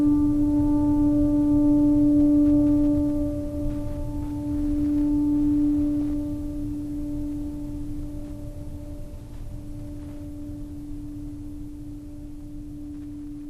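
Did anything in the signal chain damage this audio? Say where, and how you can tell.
Yes. The codec stage has marked this music throughout. The top end sounds dull. Upper bands flicker in and out. What remains has a gurgling, granular edge. This is MP2 compression, likely at a low bitrate near 80 kbps.

At 6.01 to 6.10 s there is a burst of DAB burbling. Short blips of noise appear in single sub-bands over the music. This points to weak reception. A few bit errors slipped past error correction and corrupted several MP2 frames.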